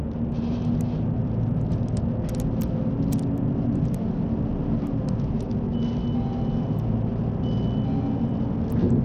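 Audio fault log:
Throughout: Bluetooth SBC compression, the likely cause of treble flickering out and gritty noise, as starved upper sub-bands get almost no bits. Spectrogram shows blinking, patchy high bands, fitting an 80 kbps stream.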